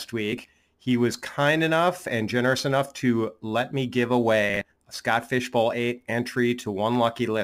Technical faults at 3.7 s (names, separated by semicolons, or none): crude rate conversion